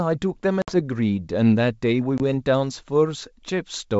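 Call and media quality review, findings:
Packet loss on an ADPCM call at 0.62–0.74 s and 2.18–2.21 s. Hard-edged silent gaps of 60 ms, about three packets, then 20 ms, about one. The decoder's predictor and step size desync, so audio returns slightly distorted before settling. The G.722 wideband path sounds clean.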